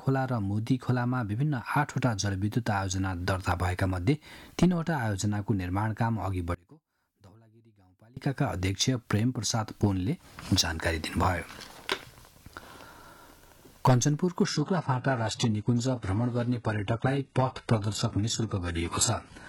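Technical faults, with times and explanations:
6.55–8.17 s: one channel inverted, likely, since the level falls about 30 dB and leaves a faint residue rather than the true silence of a dropout.
14.45–19.49 s: adaptive stream at a lower bitrate. The switch is sudden with no gap, and nothing remains above 11.5 kHz, which fits a very low-bitrate HE-AAC version.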